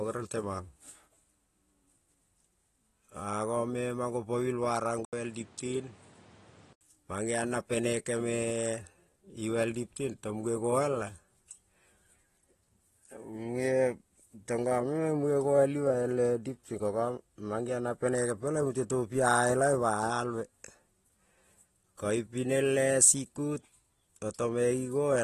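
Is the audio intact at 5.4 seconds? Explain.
No. At 5.4 s the audio sits inside a stretch from 5.05 to 6.81 s where the input switched to a poorer device, most likely a change to another microphone or a headset's call profile. The new path passes less bandwidth, with nothing above 10.3 kHz, so the sound turns duller and boxier. An 80 ms gap marks the switch, and a new noise floor appears well below the signal while the level stays about the same. The fuller sound returns just before "mangeon na penekeme".

Underneath that, the whole clip carries AAC compression artefacts. Content above 12.5 kHz is missing, and the codec damage is plainly audible as smearing, with a warbly, fizzy edge on sibilants. This is the signature of AAC-LC coarsely quantising its frequency lines, and it fits a low bitrate around 36 kbps as the likely cause.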